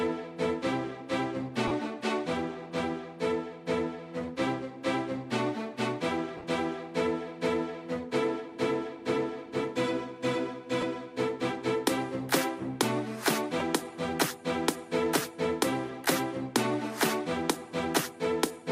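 Lost LE Audio frames at 1.68 s (30 ms), 6.37–6.44 s (scattered, longest gap around 15 ms), 10.81 s and 13.59 s: the decoder refilled gaps with sign-scrambled copies of the previous spectrum, smearing tones into brief noisy patches.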